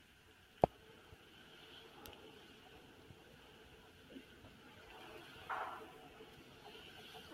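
Throughout, a speech noise suppressor left on treats the sustained parts as noise, dipping tails and held sounds by around 5 dB, so everything pumps and thins.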